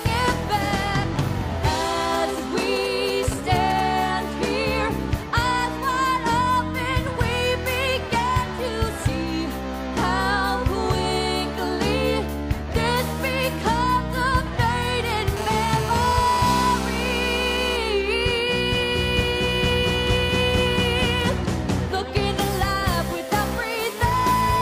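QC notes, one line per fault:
2.14–3.81 s, GSM signalling bursts: a nearby 2G phone was exchanging brief signalling bursts, and the audio circuit rectified the radio pulses. The result is a galloping dit-dit-dit of ticks and short buzzes at the 217 Hz burst rate, roughly 10 dB below the signal.
15.37–17.77 s, GSM phone buzz: a 2G phone in a call transmitted continuously at 217 bursts per second, and the circuit demodulated the pulses into the audio path. This gives a steady, hard, raspy 217 Hz buzz rich in harmonics, about 10 dB below the signal.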